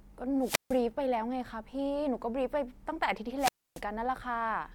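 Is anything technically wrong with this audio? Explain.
Yes, there are two wireless microphone squelch dropouts in this speech, at 0.40 to 0.80 s and 3.37 to 3.82 s. The FM radio link from the microphone weakens until the receiver's squelch shuts the output off rather than pass pure noise. Each time, hiss or static briefly swells, then the audio drops to near silence, for about 150 ms in the first event and about 280 ms in the second, before the voice returns.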